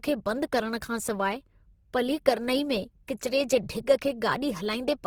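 From start to end the speech has a rough, grainy texture that is plainly audible, most likely from Opus compression. Where bits ran short, each band kept its proper energy but was filled with folded or noise-like content, so the sound turns coarse rather than swirling or bubbly as MP3 would. Bandwidth stays full, reaching about 20.2 kHz, and the damage fits Opus's CELT music mode at a low bitrate near 16 kbps.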